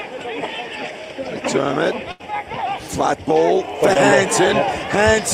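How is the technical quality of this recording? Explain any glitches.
Two network dropouts mar the recording, one long and one very brief.

From 2.11 to 2.21 s there is a burst of packet loss. Several consecutive packets failed to arrive in time, so the receiver extended the last sound it had for about 80 ms, fading it as it went, and then jumped ahead. About 80 ms of material is missing. It is heard as a held tone or hiss that decays, followed by the audio resuming further on. Unlike a short concealed loss, the fill is long enough to hear as a sustained, fading sound rather than a blip.

Around 3.93 to 3.97 s there is a short concealed packet loss. Roughly 20 ms never reached the decoder, and it synthesised about 16 ms from the preceding sound before blending back into the real signal. The result is a momentary smear or wobble. What separates it from the earlier burst is its length: there is no audible fade, just a small disturbance in the flow of sound.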